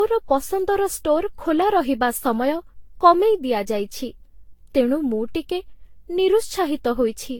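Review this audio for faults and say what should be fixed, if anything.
Across the whole speech recording the sound is swirly and hollow, with a watery smear and blurred consonant onsets, and nothing survives above about 18.3 kHz. That degradation is worse than a single lossy pass at this quality would leave, so the likely cause is generation loss: the audio has been re-encoded around ten times, in a way that points to a Vorbis-style codec near 70 kbit/s. Each fresh pass re-quantised on a shifted frame grid, piling up noise and spectral holes. To prevent it, keep a lossless master and encode to a lossy format only once, at the final step.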